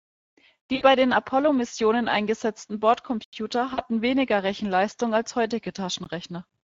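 Across the whole speech clip the Speex codec leaves a hoarse, grainy texture, with audible damage that fits a mid-rate setting near 16.8 kbps. On a spectrogram, the band above 8 kHz shows a smeared, noise-like wash instead of clear harmonic detail.

From 0.75 to 0.83 s, VoIP packet loss concealed by the speech codec fills a gap of about 60 ms. The decoder stretches the last pitch and filter into a sound that fades. On the spectrogram this shows as repeated, frozen content that weakens frame by frame.

From 3.24 to 3.33 s, a block of digital silence lasting about 85 ms cuts the sound abruptly, which fits an unfilled 4096-sample buffer. The waveform drops to a near-silent stretch with vertical edges.

From 3.73 to 3.84 s, a second concealed packet loss covers about 40 ms. It produces another short, decaying smear, and the sound stays weak or distorted just after it.

At 6.04 s, a very short dropout of under 20 ms cuts the sound briefly. 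On the waveform it is a sliver of silence with sharp edges.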